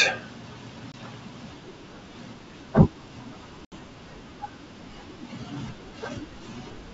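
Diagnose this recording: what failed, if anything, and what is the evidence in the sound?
Network-stage packet loss on an ADPCM call, carried in G.722 wideband coding that itself keeps the speech clear up to about 7 kHz. The speech drops to hard-edged silence from 0.92 to 0.95 s, about 20 ms missing, and from 3.65 to 3.73 s, about 70 ms missing. That fits a couple of packets and then roughly seven. The spectrogram shows blank vertical gaps, and the waveform flatlines abruptly. Packets were lost and silence was inserted in their place, so the decoder's adaptive predictor and step size lost sync with the sender's, and speech resumes with a brief level or distortion error.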